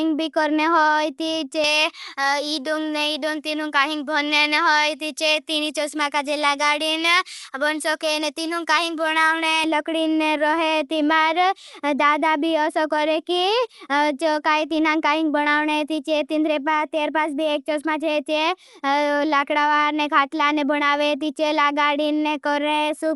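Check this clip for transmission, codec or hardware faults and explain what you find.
Two faults are audible in the speech. Throughout, a low-bitrate encode is likely Dolby Digital compression, consistent with about 64 kbps. The encoder dropped everything above 11.5 kHz and starved many frequency lines of bits, leaving dull, plainly damaged speech with rough, fluttering noise around tones.

From 1.64 to 9.64 s, pre-emphasis was left on. The treble boost, which fits a J.17 curve, was never undone, so 10 kHz sits about 11 dB high relative to 1 kHz, making the speech thin, bright and sibilant.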